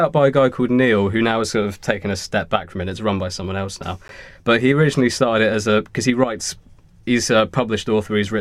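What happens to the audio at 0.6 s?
Nothing goes wrong at 0.6 s; the speech there comes through intact, with no dropout, click or distortion.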